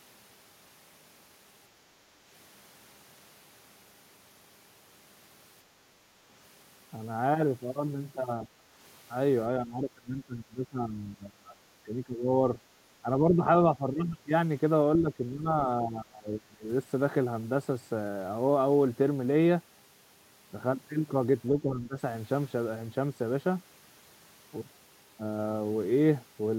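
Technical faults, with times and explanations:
8.43 to 21.97 s, speech suppressed in double talk: the speech dips at 8.43–8.63, 9.59–12.27, 13.02–13.44, 13.76–14.29, 14.98–16.69 and 21.49–21.97 s. Drops reach about 20 dB, some only about 10 dB. An echo canceller likely mistook overlapping talk for echo and turned everything down.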